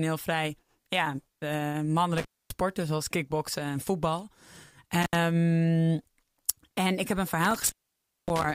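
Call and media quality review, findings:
Intermittent contact, three dropouts. 2.17–2.51 s, after "vrij ja eh", before "zoals kickboksen en voetbal": about 256 ms open, crackle at both edges. 5.02–5.15 s: short 70 ms open. 7.45–8.52 s, after "en ik heb een": about 561 ms open, faint hiss underneath. Probably a loose cable or plug briefly breaking the signal path; worth reseating or swapping the lead.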